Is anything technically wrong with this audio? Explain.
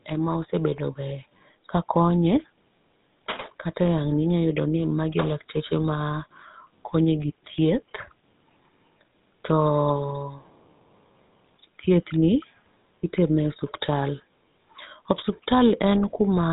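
Yes. Throughout the speech there is GSM full-rate codec damage, and it is plainly audible. The codec rebuilds speech from a vocal-tract filter driven by a sparse, regularly spaced pulse excitation, discarding most of the fine detail; the result here fits the 13 kbps full-rate coder. The audio gains a buzzy, gravelly roughness, and the band stops at about 3.8 kHz, leaving the sibilants dull and the top end missing.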